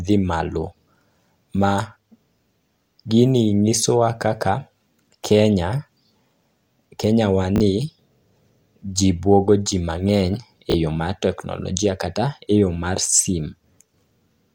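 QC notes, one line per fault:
7.56–7.60 s and 10.70–10.74 s, chunks out of order: a 20 ms chunk plays one chunk late, giving a brief jumbled stutter but no missing audio or gap.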